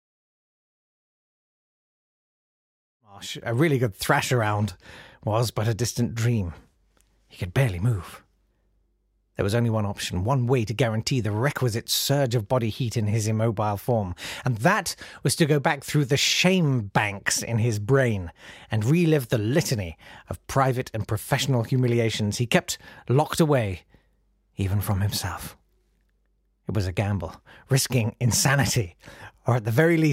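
The speech signal shows no technical faults, with a smooth editor's fade-in bringing the level up from about 3 s to full by 3.74 s without any click or hard edge.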